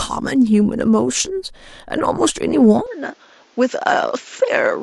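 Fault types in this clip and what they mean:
Input switched to a poorer device: the recording path likely changed to a lower-grade microphone or headset profile at 2.86 s, with no gap. From there the speech loses everything above 7.6 kHz and sounds duller, drops around 5 dB in level, and carries new background noise roughly 35 dB down.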